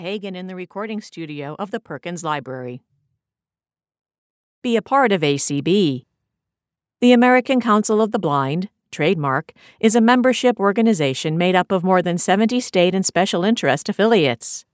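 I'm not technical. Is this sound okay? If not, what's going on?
No. Automatic gain rising: just after "in the", at 0.73 seconds, the call's volume control judged the input too quiet and slowly turned itself up until 5.78 seconds. The speech and the background noise swell louder together over those five seconds.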